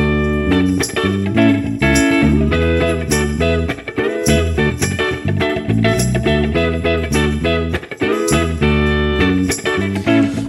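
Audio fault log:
4.69 s compressed frames skipped: roughly 0.7 s of sound vanishes, consistent with about twenty 26.1 ms frames. Overlapping frames smear the join into a brief blip, so a spectrogram shows an abrupt seam with no vertical click line.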